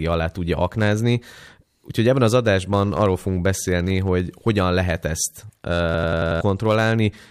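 Right after "hogy hogyan lehet ezt", from 5.94 to 6.41 s, there's a system hang loop: the system stalled while the hardware kept replaying one 92.88 ms chunk, which fits a 4096-sample buffer. It repeats five times, a machine-gun stutter at 10.8 Hz, and about half a second of audio is lost.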